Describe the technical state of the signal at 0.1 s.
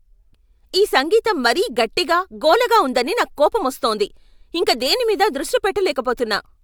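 At 0.1 s the speech signal is intact, with no audible fault at that moment.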